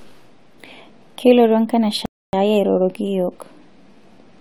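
At 2.06 s a rebuffering stall halts speech for 0.28 s while data arrives, then resumes exactly where it stopped: nothing lost, unlike dropouts.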